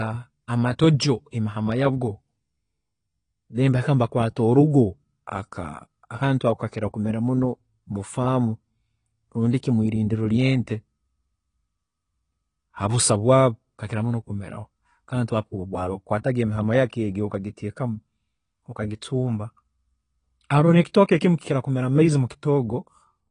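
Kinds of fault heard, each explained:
AAC compression: throughout, nothing above 10 kHz and plainly audible smearing, likely AAC-LC quantising frequency lines coarsely and lowering its cut-off, consistent with about 32 kbps.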